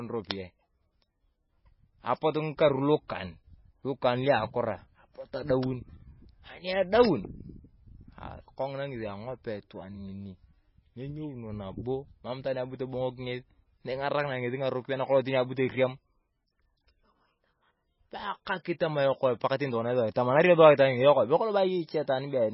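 MP3 compression damage runs throughout this speech recording. Nothing survives above 5.5 kHz, and weak spectral detail flickers between frames, giving a watery, swirly texture with smeared consonant attacks. The heavy damage fits a very low bitrate, around 16.8 kbps, that likely forced the encoder to cut the treble and discard quieter frequency lines.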